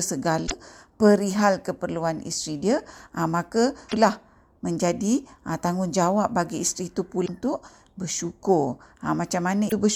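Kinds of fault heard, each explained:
Damaged data in a compressed stream: corrupted bytes make the decoder misread frames and resynchronise at the next header. Here this produces four brief glitches of roughly 70 to 100 ms, including one just before "perihal keperluan isteri" and another right after "aa ah maka".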